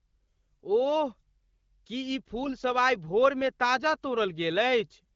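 A speech clip carried over what sounds like the AMR wideband (HD Voice) codec at a mid rate around 12.65 kbit/s, with just the light smoothing that brings, and one short patch of AMR bit errors from 2.44 to 2.51 s. For roughly 70 ms, about three 20 ms frames' worth, the voice keeps its pitch and level but goes hoarse and gargly. That points to a few percent of the weakly protected bits flipping on the link, scrambling the excitation pulses and the fine pitch, gain and spectral detail.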